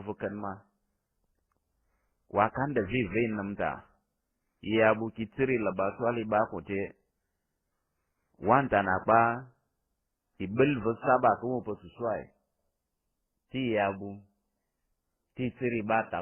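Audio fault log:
throughout, transcoding between lossy codecs: the speech has nothing above about 3.1 kHz, so it's dull and boxy, and you can hear a couple of different kinds of codec damage layered on top of each other. That mix most likely comes from a chain of codecs: a very low-rate MP3 first, then something like HE-AAC, then Opus. Each stage spent bits re-encoding the last one's junk and added its own, and the narrowest band from the chain stuck.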